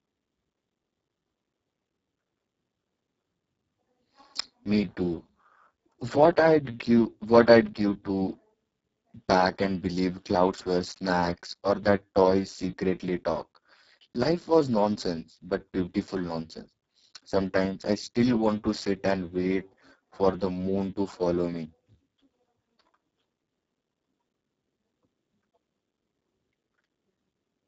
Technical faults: Speex codec

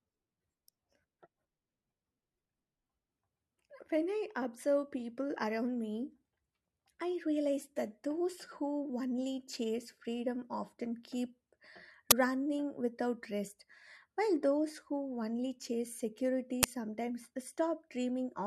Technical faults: uninitialised buffer

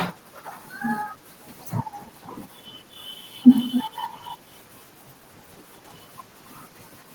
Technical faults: echo leak

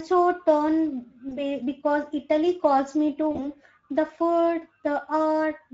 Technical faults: Speex codec; VoIP packet loss concealed by the speech codec

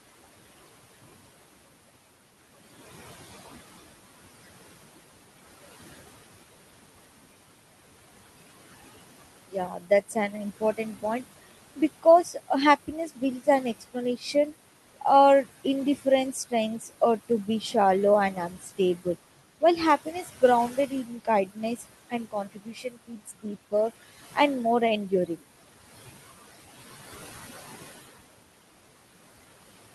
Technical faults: noise suppressor artifacts; speech cut by the noise suppressor

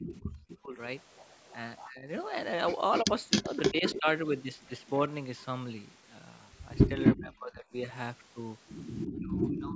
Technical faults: echo leak; speech suppressed in double talk

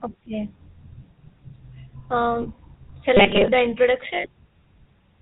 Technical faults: GSM full-rate codec; lost GSM frames

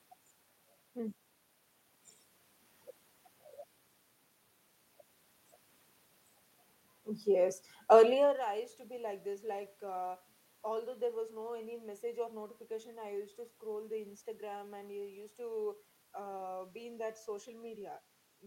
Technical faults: none

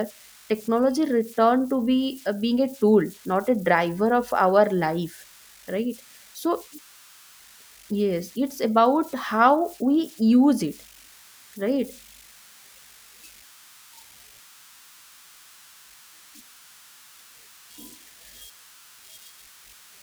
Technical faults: converter idle tones

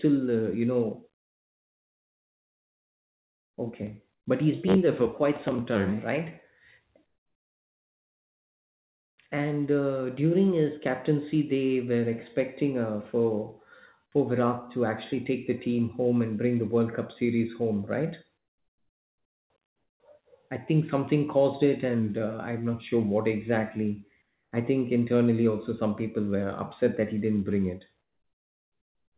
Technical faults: comfort noise in place of the background

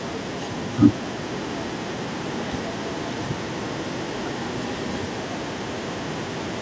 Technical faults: echo leak

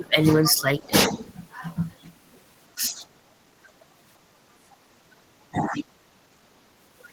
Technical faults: speech suppressed in double talk; other side's voice leaking through

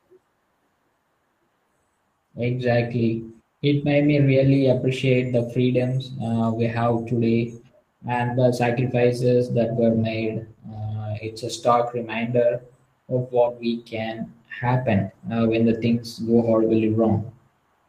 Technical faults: none

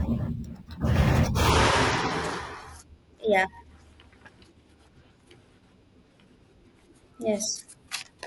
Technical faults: imaging from sample-and-hold upsampling

